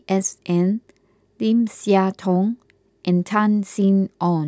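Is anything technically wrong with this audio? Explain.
No, nothing is technically wrong with this audio.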